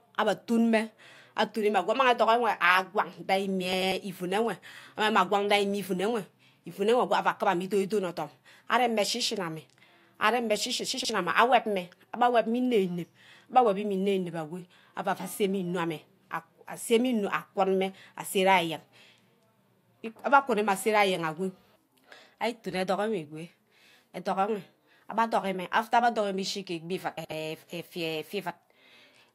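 Frames out of order at 3.73–3.92 s, 11.00–11.10 s and 27.17–27.32 s in this speech clip: each stretch plays two neighbouring blocks of 96, 48 and 72 ms in swapped order. This produces a brief garbled flutter, and no time is lost.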